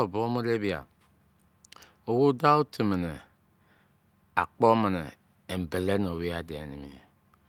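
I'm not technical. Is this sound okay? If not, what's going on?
Yes, the recording has no technical faults; nothing in it needs fixing.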